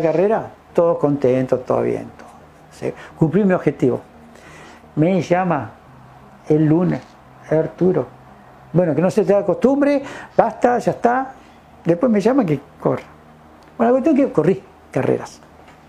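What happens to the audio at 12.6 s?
Nothing goes wrong at 12.6 s; the audio runs through that point intact, with no dropout, click or other disturbance.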